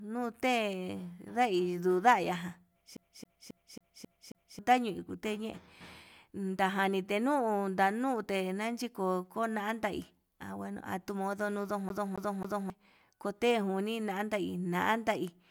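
A scratch kept throwing the laser back one track, so this speech recording shows the CD stuck on one turn twice: from 2.97 to 4.59 s a 0.27 s slice repeats six times, and from 11.89 to 12.70 s three times, each jump marked by a brief mute and a fast, even stutter.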